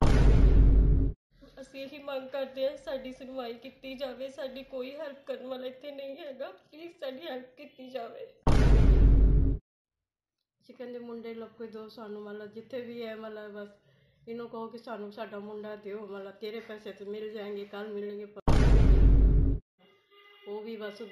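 Imaging from linear upsampling runs through the whole clip. The rate was raised by joining samples with straight lines, which fits a 16 kHz source lifted to 44.1 kHz. The top end sounds dulled. Faint mirrored content sits between 8 and 16 kHz, roughly 45 dB down, adding a light metallic shimmer.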